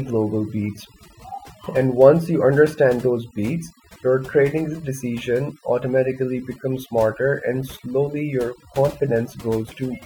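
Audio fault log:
Throughout: overdone noise removal. The background between phrases drops to an unnatural near-silence scattered with twinkling, chirping specks. A noise reduction stage was pushed too hard, so any frequency band sitting close to its noise estimate is pulled far down or shut off. Isolated bands that flicker past the threshold leave the specks, while the quieter parts of the speech are cut along with the noise.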